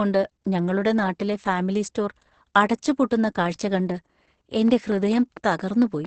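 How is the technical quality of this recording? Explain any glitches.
The quality is poor: heavy low-bitrate compression runs through the whole clip, and a burst of clicks appears near the end.

Opus voice compression, throughout: the SILK speech coder squeezed the signal into a narrow wideband channel, leaving nothing above 8.6 kHz. The coarse excitation coding makes the speech muffled, hoarse and slightly robotic, which points to a very low bitrate of around 10 kbps.

Train of clicks, 4.68 to 6.06 s: something, likely interference from nearby equipment, injects about seven similar pulses at a regular 4.4 per second. They peak roughly 5 dB above the speech, so they are heard as a steady ticking.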